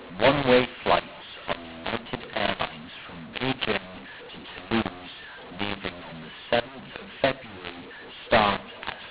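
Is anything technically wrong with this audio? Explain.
Yes. Throughout the speech, the audio shows a mu-law and A-law mix-up: the signal was encoded with A-law but decoded as mu-law. Because the two curves map the 8-bit codes to different amplitudes, every sample lands at the wrong level. Loud parts come out harsh and distorted, and pauses fill with a noise floor instead of near silence. The waveform looks jagged and uneven, and the spectrogram shows broadband grit spread across the telephone band, which stops at 4 kHz.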